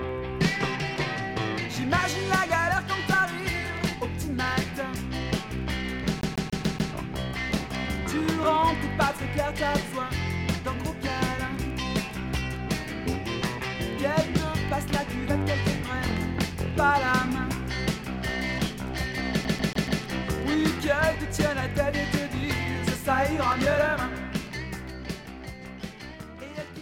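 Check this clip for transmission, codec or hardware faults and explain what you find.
CD stuck on one turn, from 6.21 to 6.93 s and again from 19.44 to 20.02 s. A scratch keeps bouncing the laser back one track, so a 143 ms slice repeats five times, then four, each jump marked by a brief mute, giving a rapid, even stutter.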